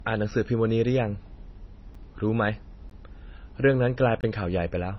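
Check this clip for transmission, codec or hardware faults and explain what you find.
Two faults are present: the speech is dull throughout, and it drops briefly to dead silence four times.

Low-bitrate audio saved at a high bitrate: the speech has nothing above 5.9 kHz and sounds muffled, likely from 24 kbit/s MP3 re-encoded at 192 kbit/s, which cannot restore what was lost.

Block of digital silence: ticks at 0.31 and 1.95 s, and short holes at 2.90 s and at 4.21 to 4.23 s, where output abruptly cuts out. Gaps of 5.3 and 21 ms fit unfilled 256- and 1024-sample buffers.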